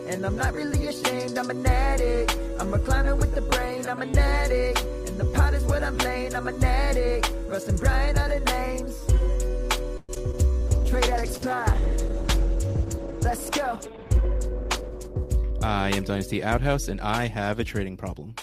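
At 9.97 s the sound stretches into a fading buzzy or hissy tail for about 0.11 s before resuming at 10.11 s. This is a call audio freeze, likely from delayed packets emptying the jitter buffer. The receiver extended the last sound, so a 114 ms gap was inserted with nothing lost. A spectrogram shows smeared, decaying bands and then a clean restart.

Short concealed packet loss follows at 10.15 to 10.18 s, where about 40 ms never arrived, and again at 10.32 to 10.35 s, with about 20 ms missing. Each hole was patched by continuing the preceding sound and blending back, so it is heard as a quick smear or wobble. The waveform shows a brief, slightly unnatural stretch.

From 10.68 s to 15.39 s a call bitrate drop takes the encoder from 48 kbps to 13 kbps for about 4.7 s. Coarser coding with the upper frequencies removed makes the sound muffled and watery. On a spectrogram the high-frequency content is cut off flat and the remaining energy looks blotchy.

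Overlapping that, from 13.75 s to 15.59 s, a jitter buffer speed-up plays the audio about 4% fast. The receiver trimmed roughly 70 ms of surplus buffered audio in small pitch-period pieces, so the sound runs a little faster at unchanged pitch. The waveform shows repeated cycles quietly cut out.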